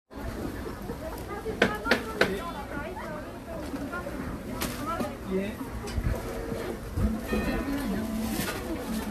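All the way through, the sound is swirly, hollow and smeared, with blurred attacks and nothing above 14 kHz: generation loss, likely from roughly four passes through AAC-LC at around 64 kbit/s.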